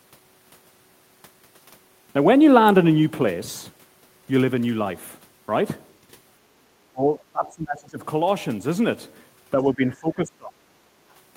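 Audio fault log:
6.91–8.03 s and 9.53–10.58 s, speech suppressed in double talk: the speech sinks by roughly 20 dB across about a second each time, thinning and breaking into pieces. This is likely an echo canceller treating overlapping far-end talk as echo and turning everything down. Unlike packet loss, the sound fades and chops unevenly instead of vanishing in clean gaps. Unlike gain pumping, it dips only during these overlaps.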